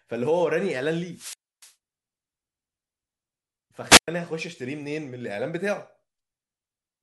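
Hiss swells, then the speech drops to near silence for 291 ms between 1.11 and 1.73 s, and again for 108 ms between 3.89 and 4.08 s. These are wireless microphone squelch dropouts: the FM radio link weakened and the receiver's squelch muted its output.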